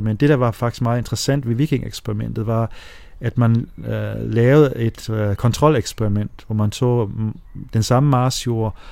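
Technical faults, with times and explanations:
No technical faults are audible anywhere in this speech recording. There is nothing to list against a time.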